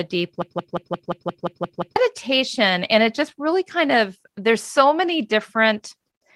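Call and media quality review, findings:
Broken-record loop, 0.42 to 1.96 s: one 175 ms speech fragment repeats back to back nine times, and the audio for that span is lost. Waveform shows identical blocks at a fixed period. Spectrogram shows a repeating pattern. Likely a stalled player or stream re-sending its last held fragment.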